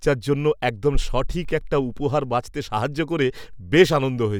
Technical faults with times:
none

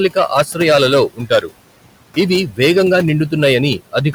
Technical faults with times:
0.00-4.14 hard clipping
0.00-4.14 noise suppressor artifacts
1.10-1.52 speech cut by the noise suppressor

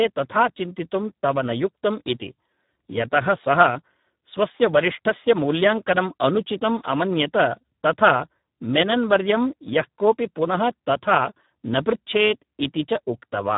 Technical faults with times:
0.00-13.57 Speex codec

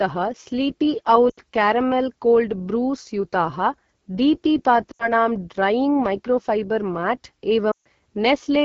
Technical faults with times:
0.00-8.64 AMR wideband (HD Voice) codec
1.30-1.39 lost AMR speech frames
4.91-5.12 lost AMR speech frames
7.72-7.86 lost AMR speech frames

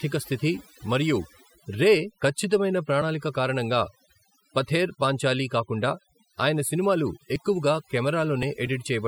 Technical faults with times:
0.00-9.08 overdone noise removal

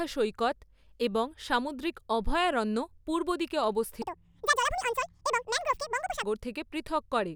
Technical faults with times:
4.02-6.23 section at the wrong speed

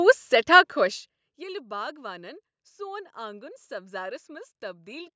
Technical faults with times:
none

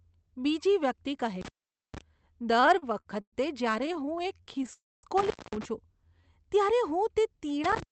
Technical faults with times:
1.41-2.01 intermittent contact
2.53-3.34 repeated stalls (stutter)
3.79-4.69 repeated stalls (stutter)
4.73-5.05 call audio freeze
5.18-5.65 intermittent contact
7.64-7.91 intermittent contact

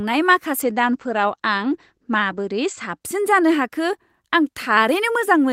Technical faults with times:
0.67-3.07 call bitrate drop

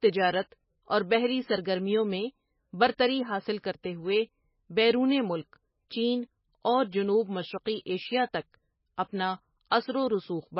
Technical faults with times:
0.00-10.60 MP3 compression

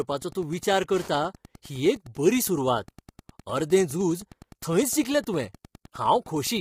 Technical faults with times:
0.00-6.61 Wi-Fi interference
0.00-6.61 low-delay AAC compression

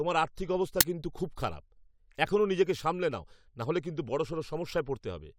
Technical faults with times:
0.81 uninitialised buffer

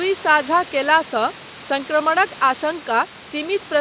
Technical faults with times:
none

